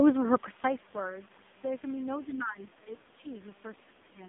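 AMR narrowband mobile codec damage runs through this 4-second speech clip. The whole signal sits in a telephone band of roughly 200 Hz to 3.6 kHz, with nothing above 3.8 kHz. The coder rebuilds the voice from a vocal-tract model fed by sparse pulses, and the heavy buzzy, synthetic quality points to one of the lowest AMR-NB modes, around 5 kbps, where too few bits remain to carry natural detail. Other side's voice leaking through appears as two brief, very faint scraps of a second voice: one at 3.10 to 3.14 s, about 40 dB below the main speech, and one at 3.75 to 3.82 s, about 35 dB down. The likely cause is that a far-end voice played on the talker's loudspeaker reached the microphone and the echo canceller failed to remove it completely, so short fragments slipped through underneath. Speech suppressed in double talk follows at 3.87 to 4.10 s. The main voice dips in pieces by up to about 15 dB, over roughly a fifth of a second in total. 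This is likely the echo canceller failing to separate the near talker from the overlapping loudspeaker echo and pulling down everything on the line to suppress it, which takes the wanted speech down along with the echo.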